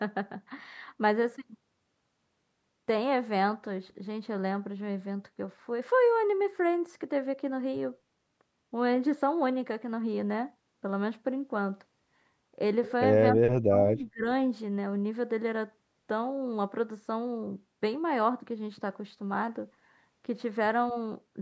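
From 13.34 to 14.26 s the speech drops around 30 dB. This is likely speech suppressed in double talk by the echo canceller.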